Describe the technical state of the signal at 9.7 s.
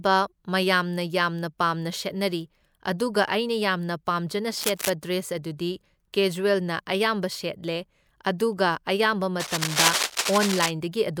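At 9.7 s the speech is covered by cable scratch noise, running from 9.40 to 10.71 s: dense, irregular scratching and rustling roughly as loud as the speech itself. The likely cause is a worn cable or connector being moved, its contact resistance jumping rapidly. On a waveform this shows as ragged, spiky bursts riding over the signal; on a spectrogram, as uneven broadband vertical smears scattered across the whole frequency range for that span.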